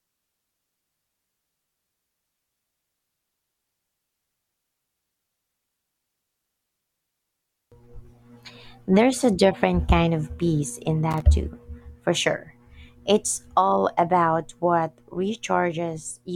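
At 11.11 s a burst of loose connector crackle lasts about 0.11 s, ending at 11.22 s. A worn contact is rapidly breaking and remaking the circuit, chopping the speech into scratchy fragments. The waveform shows jagged dropouts and spikes, while the spectrogram shows scattered broadband vertical streaks.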